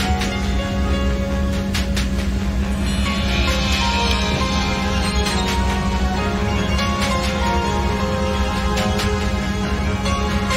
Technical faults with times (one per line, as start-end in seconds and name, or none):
4.11 electrical switching spike